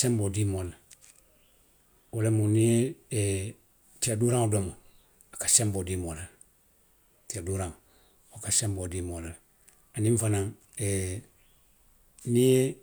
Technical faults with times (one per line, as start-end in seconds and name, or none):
none